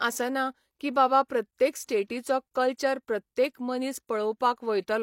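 At 1.28 to 1.30 s there is pre-echo: the codec spread quantisation noise across its block, so a short hiss leads a sharp speech attack by about 20 ms, softening it. A spectrogram shows a broadband smear just before the onset, and the waveform a fuzzy lead-in.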